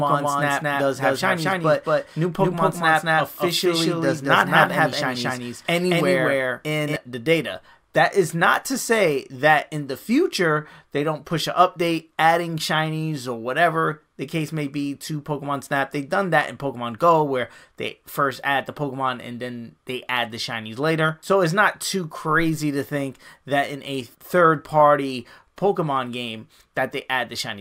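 Right from the first moment until about 6.96 s there's a doubled audio track: a second, full-band copy of the sound trails the original by roughly a fifth of a second, at about the same level. It has no decay or room colour, so it comes across as a hard, flat slap-back rather than an echo. At 6.96 s it cuts out abruptly. The likely cause is the signal being captured twice, once through a slower path.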